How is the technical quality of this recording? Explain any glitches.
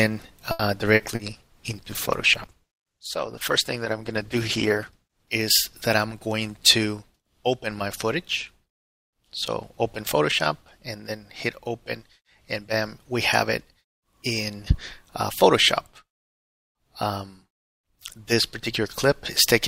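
The recording has four kinds of network glitch, all in the first seven seconds.

From 0.51 to 0.62 s there is a short stall from a late packet. A packet arrived late and the jitter buffer ran dry. The receiver stretched the last sound for 80 ms and then resumed. Nothing is lost. The sound simply hangs briefly, adding 80 ms of delay.

At 0.95 to 1.02 s and again at 1.15 to 1.22 s there is short concealed packet loss. Each time, 40 ms never arrived. The decoder filled each gap by extending the preceding sound and then blending back. Both spots come across as brief smears.

From 1.28 to 5.33 s there is a call bitrate drop. The bandwidth estimate fell and the encoder went from 96 kbps down to 15 kbps. It stayed at that low rate for about 4 s. The coarser coding makes the sound rough and muffled, with the top end cut.

From 5.97 to 6.86 s there is a jitter buffer speed-up. The buffer held too much audio. 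The receiver trimmed pitch-period pieces, roughly 70 ms in total. Playback runs at 107% speed with unchanged pitch, so this stretch sounds slightly hurried.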